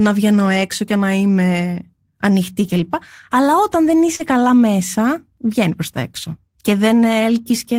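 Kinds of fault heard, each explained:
Lost packet rebuilt from error correction: after "και να είμαι ανοιχτή" around 2.63–2.85 s, and after "όταν δεν" around 4.19–4.33 s, lost packets were replaced by low-bitrate copies carried in following packets, so there's no gap but a rougher, noisier stretch, seen on a spectrogram as grainier, smeared texture.
Short concealed packet loss: at about 4.15–4.21 s, after "όταν δεν", roughly 40 ms never arrived in time and the decoder extended the preceding sound to bridge it, heard as a brief smear before blending back.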